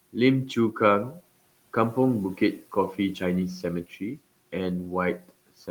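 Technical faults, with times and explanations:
1.11–1.2 s, speech cut by the noise suppressor: for about a tenth of a second the suppressor mistook soft speech for noise and pulled it down by up to about 8 dB along with the faint room noise, leaving sound faint and swallowed rather than silenced outright as in a dropout.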